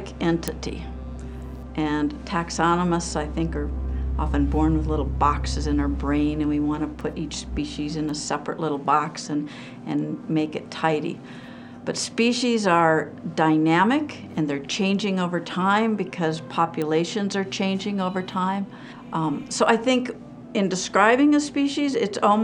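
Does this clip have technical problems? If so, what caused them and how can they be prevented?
Yes. Bit error spikes tick at 0.48, 7.01, 8.09 and 16.82 s, peaking around -6, -24, -24 and -12 dBFS. A flipped bit throws one to three samples off by a power of two, then it snaps back. Unlike a dropout, no audio goes missing. Error-checked memory and links prevent it.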